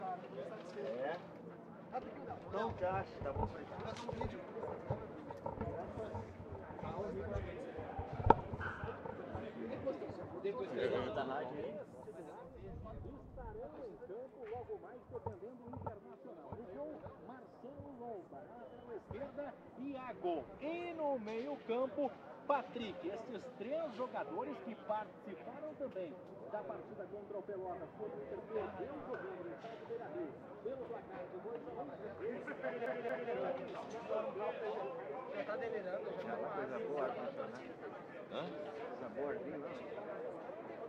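At 32.86 s the sound sticks like a CD stuck on one turn. A 229 ms slice plays twice, with brief mutes, until 33.32 s.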